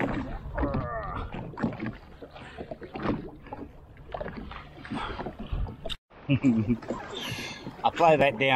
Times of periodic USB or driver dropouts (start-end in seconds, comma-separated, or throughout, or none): 7.22-8.21